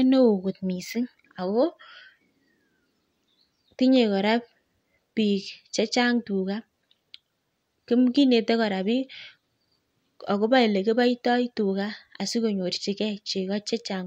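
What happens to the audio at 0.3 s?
Nothing goes wrong at 0.3 s; the speech is intact at that point, with no dropout, click or distortion to be heard.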